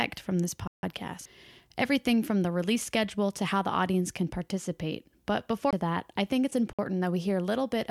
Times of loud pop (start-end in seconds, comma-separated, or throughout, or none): none